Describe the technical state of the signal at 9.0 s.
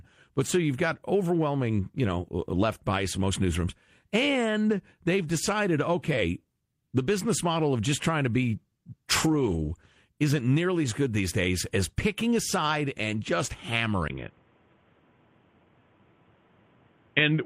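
At 9.0 s the speech is in a call bitrate drop, from 8.44 to 10.05 s, after "of just trying to". The encoder's bitrate falls from 40 to 16 kbps, so the speech is coded coarsely and sounds rough until "isn't nearly as good".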